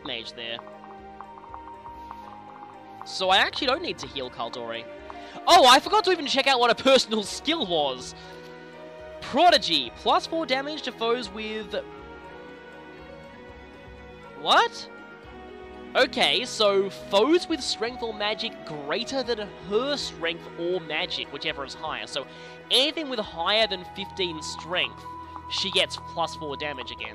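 No technical faults can be heard anywhere here.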